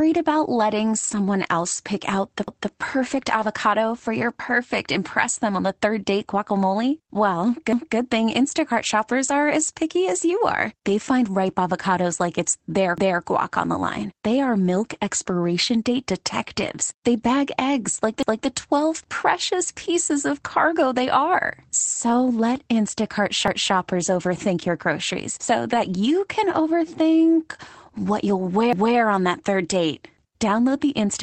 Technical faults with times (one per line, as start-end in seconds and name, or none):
1.03-1.17 lost packet rebuilt from error correction
2.48-2.73 overlapping chunks
3.10-3.48 lost packet rebuilt from error correction
12.98-13.23 overlapping chunks
16.66 lost packet rebuilt from error correction
18.23-18.48 overlapping chunks
23.48-23.73 overlapping chunks
25.72-25.94 lost packet rebuilt from error correction
28.73-28.98 overlapping chunks
30.89-30.95 lost packet rebuilt from error correction